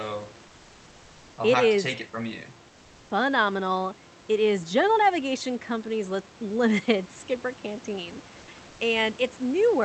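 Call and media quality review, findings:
Comfort noise in place of the background, 0.47–1.37 s (ending before "I'll it have is") and 8.39–8.47 s: likely Opus DTX halting transmission, so synthetic noise about 1 dB and 2 dB quieter replaces the real room background.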